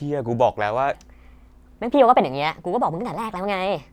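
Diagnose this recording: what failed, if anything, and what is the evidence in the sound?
A section at the wrong speed runs from 0.94 s to the end at 3.93 s. At that point the speech abruptly turns hurried and higher, running at 1.26 times its proper rate with the pitch lifted by about four semitones, since speed and pitch rise together. The stage is likely an edit or playback step that took this part against the wrong clock, so its samples are consumed faster than they were captured.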